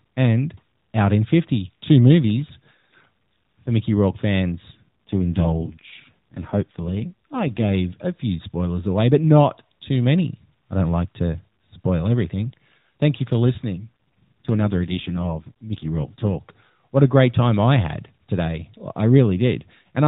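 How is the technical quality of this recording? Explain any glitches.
The speech has two stretches where it turns audibly rougher, both AMR rate drops, heard over a narrowband mobile path whose sound stops at 4 kHz.

From 4.72 to 7.73 s, ending just before "a few spoilers away", and again from 13.80 to 16.37 s, right after "you for", the voice goes buzzier and more synthetic, with no gap and no change in bandwidth. This points to the AMR codec stepping down from its 12.2 kbps mode to around 5.9 kbps to spend the bits on error protection, then recovering.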